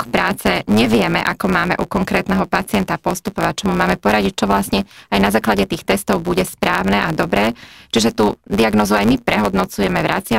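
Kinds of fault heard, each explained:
Block size mismatch (truncated): Each block loses its end, giving a buzz near 109 Hz throughout, and the speech runs about 1.09 times fast with its timbre kept.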